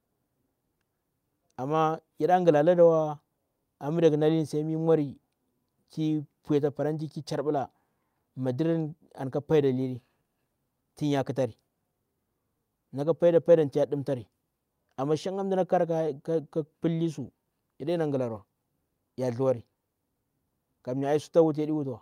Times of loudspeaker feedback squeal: none

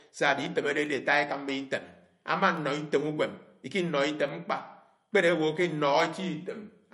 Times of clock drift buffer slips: 0.86-6.00

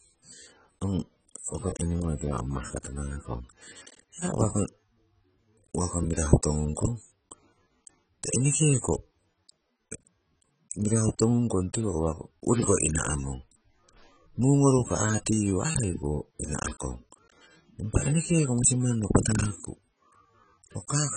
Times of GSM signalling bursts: none

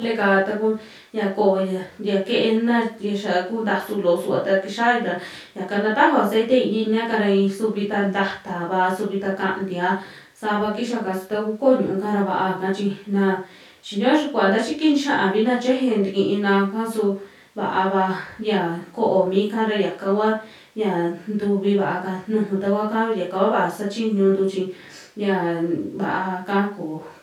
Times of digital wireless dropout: none

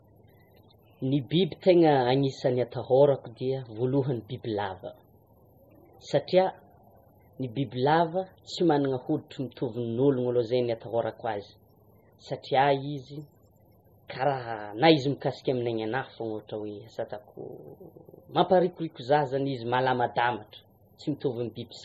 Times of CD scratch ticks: none

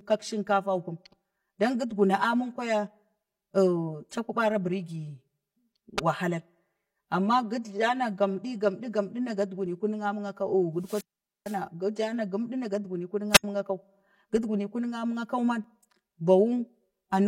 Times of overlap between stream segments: 9.66-9.70, 15.64-15.68

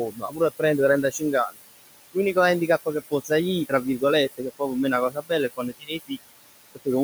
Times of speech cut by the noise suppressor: 0.11-0.62, 5.10-5.31, 5.57-6.11

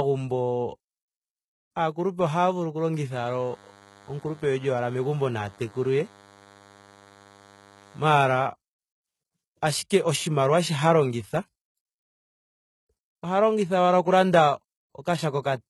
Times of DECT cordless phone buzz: 3.13-8.46

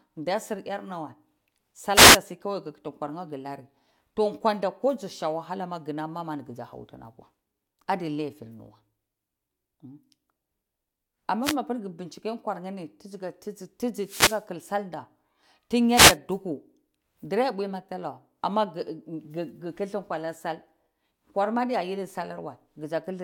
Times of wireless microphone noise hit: 1.93-2.19, 11.42-11.56, 14.00-14.46, 15.93-16.17

